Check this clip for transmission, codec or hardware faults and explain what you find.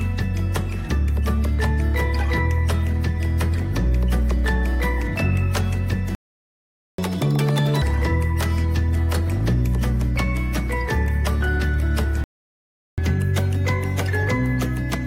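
Two playback faults occur twice each: the audio stalls into silence, then plays back fast to recover the lost time.

Playback stall, 6.15 to 6.98 s and 12.24 to 12.98 s. The sound cuts off mid-flow into silence, for about 0.83 s the first time and 0.74 s the second. The likely cause is the player running out of buffered data or its output thread being blocked, so nothing reaches the output until it recovers.

Catch-up at higher speed, 6.98 to 7.82 s and 12.98 s to the end of the clip. After each stall the player works through its backlog by resampling faster than real time. The first catch-up runs at 2.0 times speed, with pitch raised by nearly an octave. That gives a brief chipmunk-like rush before normal pitch returns. The second runs at 1.15 times speed, with pitch up by roughly two semitones, and is still in progress when the clip ends.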